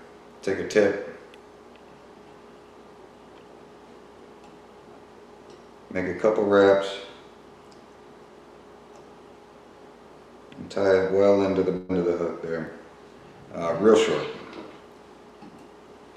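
Small forward jumps occur at 0.73, 5.96, 6.90, 11.11, 12.67, 13.94 and 15.30 s, each skipping roughly 5 to 15 ms, likely dropped buffers from overruns. From 11.77 to 11.91 s, a burst of packet loss leaves about 120 ms missing. The gap is filled with a continued, fading sound before the audio resumes further on.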